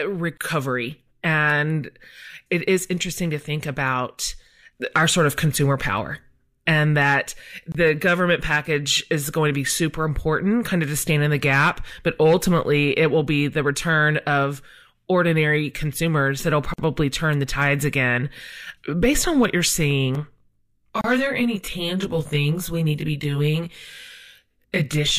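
Short holes open in the continuous speech at 0.37 s (about 31 ms), 7.72 s (25 ms), 16.74 s (48 ms) and 21.01 s (31 ms). Each is a gap at a join of encoded pieces. Separately encoded segments were spliced without removing the encoder's start-up delay and final-frame padding, so a stretch of silence sits at every seam. Unlike a network dropout, no audio is lost. The speech resumes exactly where it halted, and the edges are blurred by the codec.

From 20.15 s to the end, the sound turns rough and slightly doubled. This is channel delay (comb filtering). One channel runs around 20 ms behind the other, and summing to mono cancels shared content at evenly spaced frequencies, with the first notch near 30 Hz. Reverberation smears sound in time. Comb filtering does not, and its notches stay fixed in the spectrum. The gap at 21.01 s falls inside this stretch.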